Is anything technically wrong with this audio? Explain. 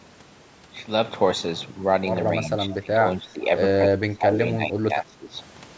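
Yes. There are two linked faults from a speakerphone-style call path.

From 2.71 to 2.75 s there is an echo leak: a faint delayed copy of the speech, around 239 ms late and about 20 dB below the direct sound. It is likely residual loudspeaker pickup that the far end's echo canceller failed to remove and sent back. Unlike a room reflection, it is a discrete repeat rather than a smooth reverberant tail, and it adds sound instead of taking any away.

Right after that, the speech is suppressed in double talk three times: from 2.81 to 3.05 s, with dips of roughly 15 dB; from 3.21 to 3.42 s, a shallower drop of a few dB; and from 3.87 to 5.33 s, where about a second of the talker is pulled down by up to around 20 dB. This is likely the echo canceller turning down the near talker because it could not separate that voice from echo while the other side was speaking. What distinguishes it from a network dropout is that the level dips and recovers in chunks rather than going silent with clicks or repeated fragments. 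This suppression is also separate from the call path's normal limit of nothing above 8 kHz, which is present throughout.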